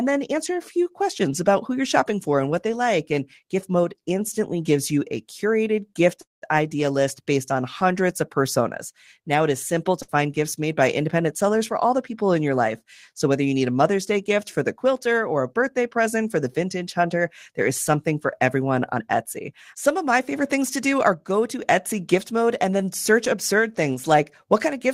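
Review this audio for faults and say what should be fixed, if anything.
A call audio freeze at 6.21–6.44 s, after "you a curated gift", likely from delayed packets. About 0.21 s is inserted, a short fading tail then 0.16 s of flat silence on the waveform. Deeper jitter buffering would absorb such delays.

A burst of packet loss at 10.02–10.10 s, before "gifts made by independent". The last sound is stretched into a decaying smear and 60 ms is lost, leaving a visible spectral discontinuity. Forward error correction would recover it.

A jitter buffer speed-up from 18.93 to 21.31 s, after "is something for everyone". Pitch periods are dropped, so playback runs about 107% fast and around a fifth of a second vanishes, with the waveform compressed and the pitch unchanged. Gentler buffer drain rates would prevent it.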